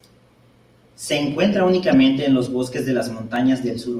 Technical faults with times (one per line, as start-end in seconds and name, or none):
1.32 dropped samples
1.92-1.95 corrupt frame decoded
3.36 dropped samples